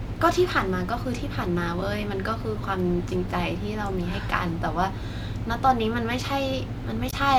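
At 7.09 to 7.14 s, damaged data in the compressed stream corrupts the speech: the decoder misreads the bad frames and loses sync, producing a brief glitch.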